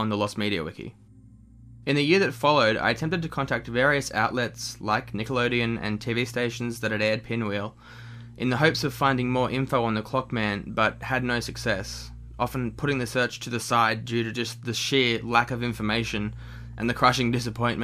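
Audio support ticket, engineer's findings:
No audible faults found on review. Nothing to escalate on this ticket.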